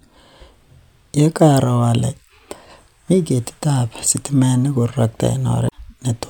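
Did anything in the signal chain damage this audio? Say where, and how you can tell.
Yes, at the codec stage: damaged data in a compressed stream causes a short break from 5.66 to 5.72 s as the decoder loses frame sync, showing as a brief disruption on the spectrogram.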